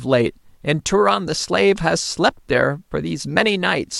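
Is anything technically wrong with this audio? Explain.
No, nothing technically wrong turns up in this bit of speech, so there's nothing here to flag.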